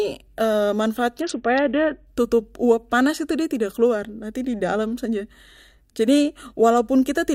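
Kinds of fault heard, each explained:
Bluetooth SBC bit pool drop: from 1.21 to 2.07 s, a starved bit allocation dulls the treble and adds grit; unlike a dropout, the sound never breaks.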